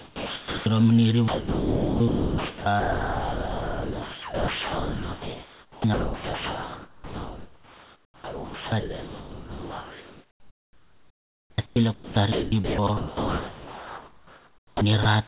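Right from the start, 0 to 0.66 s, there's sound dropped by the voice detector: about 430 ms of quiet speech gets swapped for steady comfort noise. The sender's detector most likely judged it background and held off sending until the level rose enough to trigger.

From 1.28 s to 15.05 s the problem keeps recurring as sound chopped by the voice detector. Soft syllables and word edges keep getting replaced by synthetic noise, about 12.4 s in total across that stretch, so the speech sounds choppy. The likely culprit is the detector toggling on and off, all over narrowband audio with nothing above 4 kHz.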